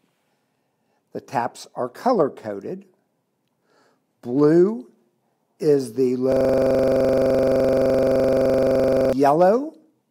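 The system froze from 6.32 to 9.13 s while the hardware replayed one 42.67 ms buffer, a system hang loop buzzing steadily at 23.4 Hz.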